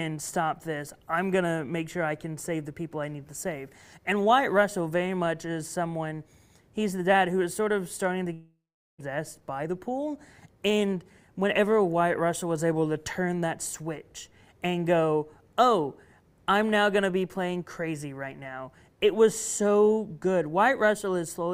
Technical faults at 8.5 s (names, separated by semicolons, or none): long network dropout